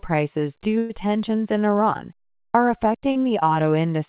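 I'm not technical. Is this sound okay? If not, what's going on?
No. Around 0.78 to 0.91 s there is a burst of packet loss. About 120 ms never arrived. The last sound is stretched and fades, then the audio jumps ahead. At 3.11 to 3.17 s there is a short concealed packet loss. About 40 ms went missing and was patched over, leaving a brief smear or wobble. The whole clip also sounds phone-like, with nothing above 4 kHz, as expected from this call line.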